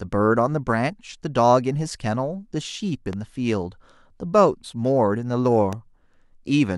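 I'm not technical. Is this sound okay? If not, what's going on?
No, not quite. There are two loud pops, one at about 3.13 seconds and another at about 5.73 seconds. Each is a single sharp click, a bit louder than the speech, and the speech carries on underneath. The likely cause is a quick jolt of electricity getting into the recording, from something like a cable being bumped, a switch or a static spark. The equipment passes that jolt along as a brief thump.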